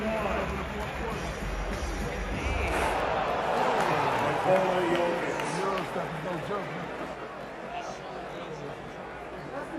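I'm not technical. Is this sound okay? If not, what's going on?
No. From about 7.14 s to the end at 9.79 s, the sound turns rough and slightly doubled: channel delay (comb filtering). One side arrives about 20 ms late, so mixed together, evenly spaced pitches cancel. Unlike a sweeping effect, the cancelled pitches stay fixed rather than moving.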